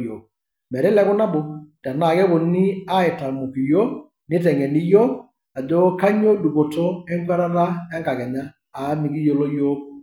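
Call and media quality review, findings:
No faults found in this speech clip. No path details noted beyond the audio itself.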